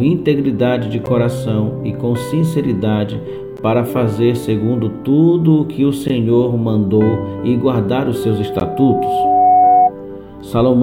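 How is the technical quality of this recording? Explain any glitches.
The recording has two kinds of glitch: repeated dropouts and a feedback squeal near the end.

Gaps between chunks occur at 1.06, 3.57, 6.08 and 8.60 s. The audio was delivered in 2.5-second pieces, and each join leaves about 13 ms of silence. Nothing is lost, but each join is a brief hole.

Loudspeaker feedback squeal runs from 8.22 to 9.91 s. A microphone picked up its own loudspeaker, and the loop gain at 731 Hz exceeded one. That tone swells over about a second and a half into a squeal roughly 5 dB above the sound.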